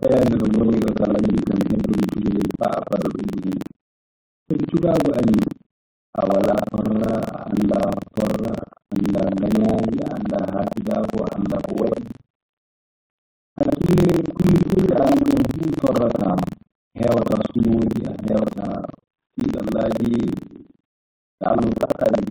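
Throughout the speech, buffer tearing produces a steady 21.5 Hz robotic rattle: writer and reader cross each period, which fits a 2048-sample buffer, splicing in roughly a third of audio from about 100 ms earlier. The band stops at 4 kHz, consistent with G.711 mu-law call coding. From 11.88 to 13.08 s, repeated stalls (stutter) occur: the jitter buffer ran dry eight times, and concealment stretched the last sound in gaps up to 80 ms, so the speech drags. From 13.82 to 16.38 s, a jitter buffer slow-down repeats pitch periods to rebuild reserve, adding 259 ms and running at 90% speed with pitch unchanged. Within it, from 14.34 to 15.07 s, six more short stalls of up to 15 ms add slight hitches. From 18.24 to 22.08 s, a jitter buffer speed-up trims pitch periods to cut excess delay, running at 107% speed, so the speech sounds hurried at the same pitch.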